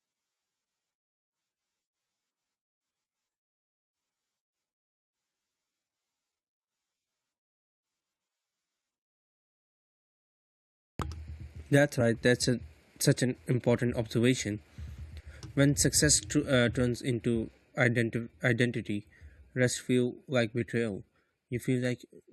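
At 11.99 s, just before "that's a such an", the speech jumps slightly ahead. These are compressed frames skipped: about 20 ms of audio never plays.

From 18.82 to 18.84 s there is a faint chirp-like blip of noise peaking around -50 dBFS. This is a corrupt frame decoded: a couple of frames with flipped bits were played anyway, putting misplaced energy at the wrong frequencies.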